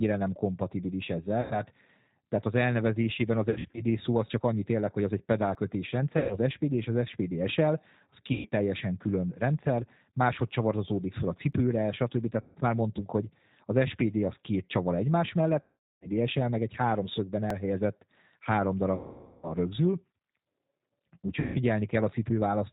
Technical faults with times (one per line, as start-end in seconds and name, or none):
0.00-22.73 G.729 codec
1.42-1.60 VoIP packet loss concealed by the speech codec
3.50-3.83 VoIP packet loss concealed by the speech codec
5.55 audio missing between chunks
6.18-6.38 VoIP packet loss concealed by the speech codec
8.32-8.49 VoIP packet loss concealed by the speech codec
11.53 audio missing between chunks
12.40-12.57 VoIP packet loss concealed by the speech codec
15.62-16.08 VoIP packet loss concealed by the speech codec
17.50 audio missing between chunks
18.95-19.53 VoIP packet loss concealed by the speech codec
21.40-21.59 VoIP packet loss concealed by the speech codec